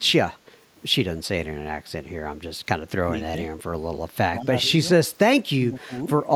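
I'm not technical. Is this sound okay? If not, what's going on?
No, there are two problems. First, an echo leak: at 0.35 to 0.39 s and 5.79 to 5.86 s, a faint copy of the voice comes back 177 ms late, likely because a loudspeaker's sound slipped past the echo canceller.

Second, speech suppressed in double talk: at 3.31 s, 4.38 to 4.51 s, 4.68 to 4.73 s, 5.38 to 5.62 s and 5.80 to 6.07 s, the voice briefly drops or thins, likely because both sides spoke at once.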